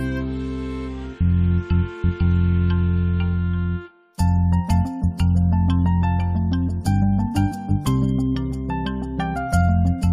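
No technical faults are audible anywhere in the audio.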